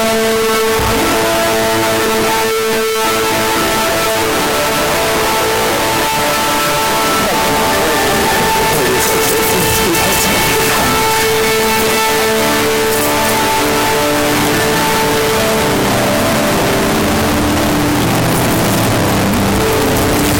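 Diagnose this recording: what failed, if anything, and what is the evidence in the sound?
Sample-format conversion, I'd say: very loud, harsh distortion runs the entire clip with quiet stretches as loud as everything else, likely signed and unsigned mixed up on 16-bit samples.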